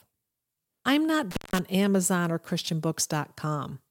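Right after "I'm not", at about 1.31 s, the speech drops out in an intermittent contact fault running to 1.59 s. A loose plug or cable opens for roughly 168 ms, so you get a crackle at each edge with faint hiss in between.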